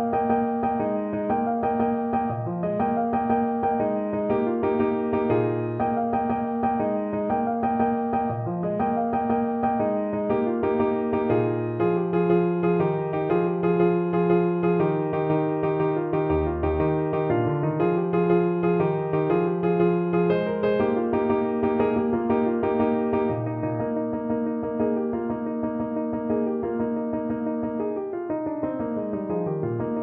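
No technical faults are audible.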